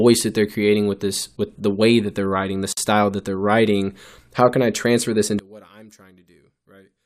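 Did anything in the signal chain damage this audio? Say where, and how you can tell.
Yes. At 2.73 s, after "that they're writing the", the speech drops out for about 47 ms and then resumes where it stopped. The edges are smeared. This is a gap at a join of encoded pieces. Separately encoded segments were spliced untrimmed, leaving encoder delay and padding as silence.

From 5.39 s, after "can I transfer this", to the end, the speech falls by about 25 dB and turns faint. One channel was likely inverted, probably in analogue wiring or channel mapping. Summed to mono, the shared centre content cancels and only the difference remains.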